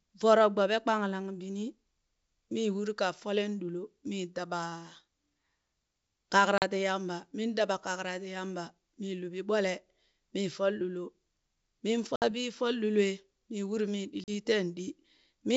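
Packet loss on an ADPCM call opens hard-edged silent holes at 6.58 s, 12.16 s and 14.24 s, the last just after "mii uri mii". About 40 ms, 60 ms and 40 ms drop out, a couple of packets at a time, or around three at 12.16 s. Each gap knocks the decoder's adaptive predictor and step size out of step with the sender's, so the speech comes back with brief distortion, then settles within tens of milliseconds. This is heard over G.722 wideband coding, whose sound fits 64 kbit/s.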